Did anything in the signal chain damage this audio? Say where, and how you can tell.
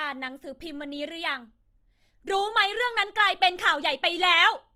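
Yes. From start to finish the speech sounds rough and grainy, with a fizzy, noise-like texture in place of clean harmonics, yet the top end stays open rather than muffled. That points to the codec stage, likely Opus compression in its music-style mode at a low rate, consistent with roughly 24 kbps. Short of bits, the encoder keeps each band's energy but fills the detail with folded or noise content, so tones turn grainy instead of dropping out.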